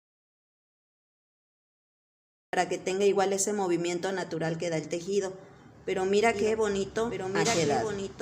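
The clip opens in an audio dropout to silence lasting until 2.53 s: pure silence with no room tone, likely a lost input while recording continued. From 6.34 s to the end, a doubled audio track appears. A copy of the sound, about 5 dB quieter and trailing by roughly one and a half seconds, switches in abruptly, dry and full-band.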